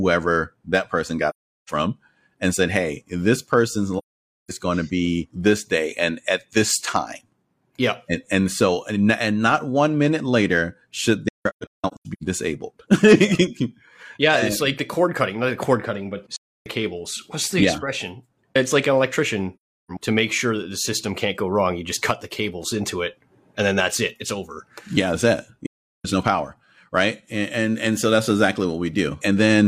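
AAC frame loss with muting occurs at 1.29–1.70 s, 3.98–4.51 s, 11.28–12.23 s, 16.35–16.66 s, 19.56–19.91 s and 25.66–26.06 s. Lost frames were decoded as silence, so the speech fades out and back in, leaving soft-edged holes that fit runs of frames about 43 ms long. The 11.28 s gap is broken into several short dropouts, the longest around 150 ms.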